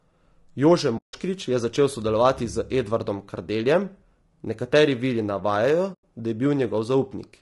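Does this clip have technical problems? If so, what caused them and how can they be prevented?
Yes. Throughout, the speech sounds rough and grainy, with noise between the harmonics and a thin, synthetic top band. This is likely low-delay AAC compression (AAC-ELD), and the damage fits a bitrate near 32 kbps. Its short frames resolve pitch poorly. Prevent it with a higher bitrate.

There is AAC frame loss with muting at 0.97 to 1.14 s and at 5.93 to 6.04 s. The sound fades into a soft-edged silence and fades back. The decoder zeroed the missing frames. Use forward error correction or concealment to prevent it.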